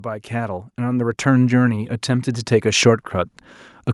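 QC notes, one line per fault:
0.05–3.14 s, automatic gain rising: the AGC decided the input was too quiet and kept pushing its gain up, about 12 dB over roughly three seconds, so the voice and the background noise swell together instead of the speech level holding steady.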